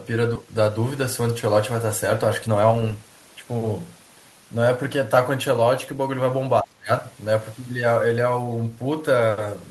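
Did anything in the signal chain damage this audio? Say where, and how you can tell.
Yes. At 0.35 s the network path or jitter buffer drops about half a second of speech and joins the two sides with no gap. This is a skip ahead. Unlike a dropout, there is no silence or concealment fill. The speech simply jumps forward.

From 0.44 to 1.54 s and again from 2.47 to 2.82 s, the jitter buffer speeds up. It trims pitch-period slices to shed excess delay, giving 107% and then 111% speed, with the pitch held steady. Resampling would raise the pitch. Here the speech is only hurried.

Between 6.62 and 7.05 s, call processing pulls the talker down by up to about 25 dB, in pieces totalling roughly 0.3 s. This is speech suppressed in double talk, likely from the echo canceller ducking during overlapping talk. The level dips instead of skipping in time.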